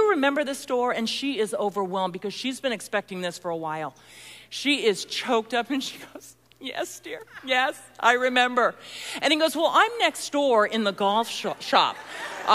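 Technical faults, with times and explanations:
Nothing to flag here; there isn't a single technical fault anywhere in the recording.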